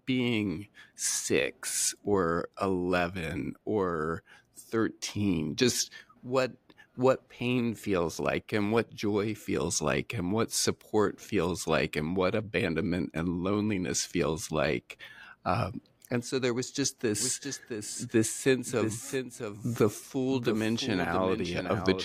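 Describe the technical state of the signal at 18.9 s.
At 18.9 s you're inside a doubled audio track, which kicks in abruptly at 17.21 s and runs right to the end. A second, full-band copy of the speech trails the original by roughly 0.7 s, sitting around 10 dB quieter, with no decay or room colour on it. So you hear each bit of speech, then a clean, dry repeat of it. The likely cause is either a slower capture path recording it twice or an edit holding two misaligned copies.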